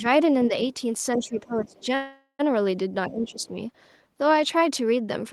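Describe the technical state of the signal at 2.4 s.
At 2.4 s the signal is in the last moments of a call audio freeze running from 1.95 to 2.41 s. Packets were likely held up and the jitter buffer ran dry, so the receiver stretched the last sound into a fading buzz of roughly 0.44 s, with about 70 ms of silence in it. On a spectrogram this shows as smeared horizontal bands that fade out, then a short blank strip. At 2.41 s the sound resumes where it stopped, with nothing missing but now running about 0.44 s late.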